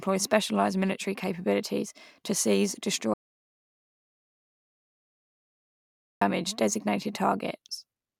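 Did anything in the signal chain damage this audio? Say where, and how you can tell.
Yes: an audio dropout to silence, likely lost input upstream of the recorder. After "military capabilities to seize" the speech cuts off at 3.14 s, leaving silence with no room tone until 6.21 s, unlike a natural pause.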